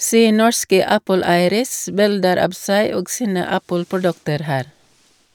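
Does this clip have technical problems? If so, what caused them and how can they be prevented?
No, nothing in this speech recording points to a technical fault, so there is no cause to trace and nothing to prevent.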